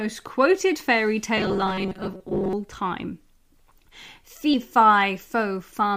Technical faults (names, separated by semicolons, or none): robotic sound from repeated short buffers; compressed frames skipped